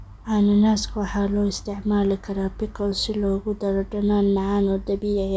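Nothing in the speech stood out as a technical fault on listening.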